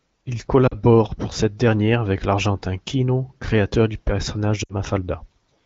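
A speech recording over an HD Voice call, with lost AMR speech frames in two places. Around 0.67 to 0.74 s the sound dips for about 40 ms, and at 4.63 to 4.75 s a longer gap of about 60 ms drops to near silence. The lengths point to two and three dropped 20 ms frames. The decoder papered over them by repeating the last good settings at falling level, and being wideband, that fade is quick. The AMR-WB coding itself sounds clean apart from light codec damage.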